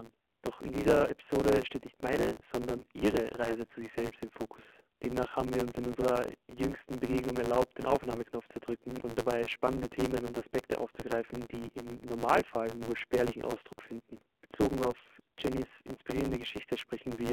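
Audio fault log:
Throughout: AMR narrowband mobile codec. The sound is confined to roughly 250 Hz to 3.4 kHz, with nothing above 4 kHz, giving a thin telephone quality. The codec models the vocal tract and excites it with a handful of pulses per subframe, and at this low rate that sparse excitation is plainly audible as a buzzy, synthetic texture. The amount of damage points to one of the lower AMR-NB modes, around 7.4 kbps.
Throughout: block size mismatch (truncated). A steady buzz sits at 109 Hz, and the audio runs 1.16 times fast while staying near its normal pitch. One stage writes longer blocks than the next stage reads, so the tail of every block is discarded. Each discontinuity is a small click, and at a regular rate those clicks fuse into the buzz. Dropping that fraction of every block shortens the timeline without resampling, which fits a 512-sample written block.
2.77–2.85 s and 15.95–15.99 s: lost AMR speech frames. 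Each event is a brief dip or warble, the first just after "steht nicht meine". When a frame fails its checksum, the decoder fills the gap by reusing the last good pitch and vocal-tract parameters at reduced gain. The result is a short, smeared, quieter stretch rather than a hard dropout, which fits one lost 20 ms frame each time. The following audio then returns briefly weak or rough.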